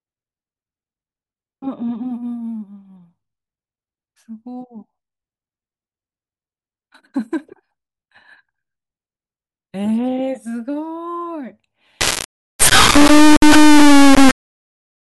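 From 12.01 s to the end at 15.00 s, the speech turns into an integer read as float fault, which points to 32-bit integer samples being read as 32-bit float. Most values land near zero or far beyond full scale, so the output slams between silence and the clipping limit. This produces an extremely loud, buzzing square wave that goes silent in the quietest gaps. Ordinary clipping would flatten the peaks but keep the speech recognisable.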